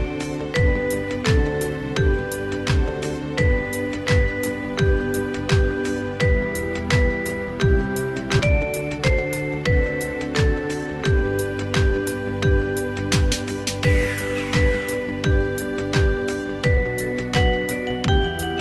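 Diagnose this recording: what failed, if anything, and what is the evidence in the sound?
A skip ahead at the network and jitter-buffer stage occurs at 8.39 s. Roughly 0.7 s of audio vanishes, and the two sides are spliced with no silence or fill. That seamless jump, rather than a gap or a smoothed concealment, separates it from a packet-loss dropout.

Jitter buffer speed-up follows from 8.49 to 9.63 s. The audio runs at about 115% speed while its pitch stays unchanged, because the receiver trims short pitch-period pieces, around a fifth of a second in total, to cut the excess delay. A resampling speed error would raise the pitch, and this does not. The Opus call path underneath, with its top end limited to about 12 kHz, carries this audio.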